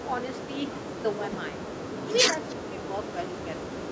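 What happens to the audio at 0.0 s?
Nothing goes wrong at 0.0 s: the speech is intact there, with only the normal call microphone processing trimming the lowest bass and leaving nothing above 8 kHz.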